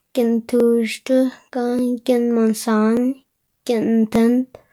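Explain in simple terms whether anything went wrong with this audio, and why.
About four regular clicks, evenly spaced every 1.18 s from 0.60 to 4.16 s, point to likely clock drift buffer slips: mismatched device clocks periodically dropping or repeating small sample blocks.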